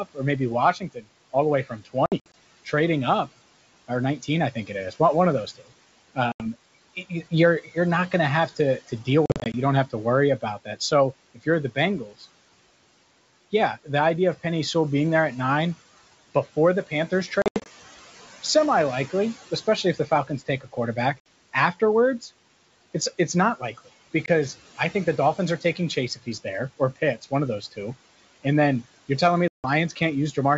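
A recording of speech over a G.722 wideband call at 64 kbit/s carries three kinds of fault. Throughout, noise suppressor artifacts are audible. The suppressor pulls the room noise down by about 16 dB in the gaps between words, but the noise comes back up under each phrase. That makes the background pump with the speech, and the leftover noise warbles and flutters as the per-band gain changes frame by frame. This continuous breathing of the background distinguishes it from the brief, local damage of the other two faults. The suppressor also misjudges some of the speech as noise, producing speech cut by the noise suppressor, at 0.74 to 1.06 s (between "or maybe" and "all the way"), 3.88 to 4.94 s, 7.64 to 12.25 s, 16.56 to 17.3 s, 19.1 to 22.29 s, 25.61 to 27.78 s and 29.9 to 30.37 s. Within these spans, soft consonants and word endings are turned down by about 10 to 16 dB and sound swallowed or faint. 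The fade is soft-edged and follows the suppressor's gain, so nothing is removed outright. Packet loss on an ADPCM call is different. It leaves hard-edged holes of silence at 2.06 to 2.34 s (just before "trading up"), 6.32 to 6.46 s, 9.26 to 9.55 s, 17.42 to 17.68 s, 21.20 to 21.26 s, 24.26 to 24.28 s (between "it's it's not likely" and "I think the") and 29.48 to 29.66 s. Each hole removes 20 to 160 ms of audio, and several are broken into short dropouts of up to 80 ms spread over roughly a quarter second. When the audio resumes, the decoder's adaptive predictor and step size no longer match the sender's. The speech therefore comes back with a click, a wrong level or some distortion for a few tens of milliseconds before settling. That abrupt gap followed by a disturbed recovery identifies it as packet loss rather than suppression.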